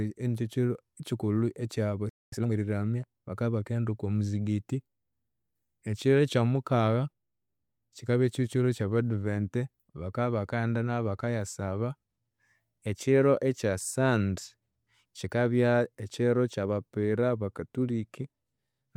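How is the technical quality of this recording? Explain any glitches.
The speech is interrupted by a brief dropout near 2 seconds. A hurried stretch follows it.

From 2.09 to 2.32 s there is a playback stall. The speech cuts to silence for about 230 ms, then resumes. The player likely ran short of data or its thread was held up, so nothing reached the output.

From 2.32 to 2.54 s comes a time-compressed catch-up. The speech plays at twice its normal rate but keeps its pitch. Small pieces are dropped and cross-faded to clear the backlog.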